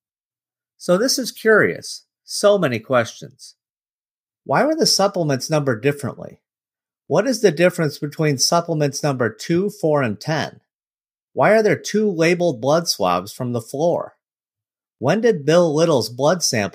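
No technical faults can be heard in this recording.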